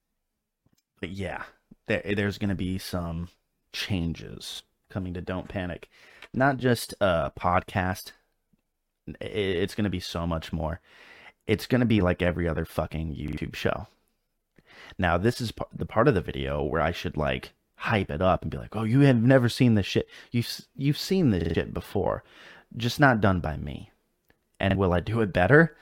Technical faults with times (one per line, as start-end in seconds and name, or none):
4.55-4.60 repeated buffer
13.28-13.37 repeated buffer
21.41-21.55 repeated buffer
24.71-24.75 repeated buffer